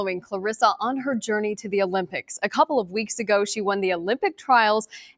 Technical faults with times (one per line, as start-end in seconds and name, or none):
0.00-5.17 noise suppressor applied to music or sounds